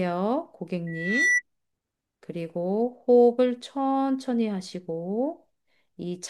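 A microphone picks up the loudspeaker it feeds, and at 2 kHz the loop gain exceeds one, causing loudspeaker feedback squeal from 0.87 to 1.42 s. The single tone swells over just under half a second to a few decibels above the speech.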